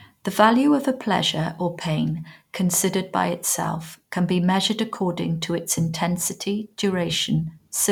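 Nothing technical stands out in this speech recording, and there's no fault to point to at any moment.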